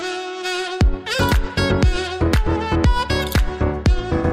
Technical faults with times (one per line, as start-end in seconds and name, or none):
none